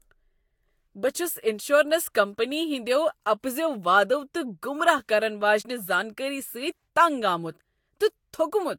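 Throughout the speech, the sound has a swirly, hollow, smeared quality, with blurred consonant onsets and nothing above 19.4 kHz. This is likely generation loss, repeated lossy encoding, pointing to a few passes through Vorbis near 70 kbit/s, each re-quantising on a shifted frame grid.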